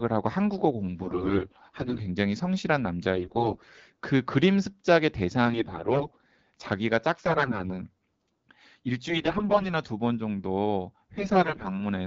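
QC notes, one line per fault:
1.01–2.00, 3.16–3.99, 5.46–6.24, 7.26–7.70, 9.08–9.72 and 11.15–11.71 s: AMR bit errors. Speech holds its pitch and level but turns hoarse, scratchy and gargly, worst in the first burst. Flipped low-priority bits misplace the excitation pulses and skew fine pitch, gain and spectral values.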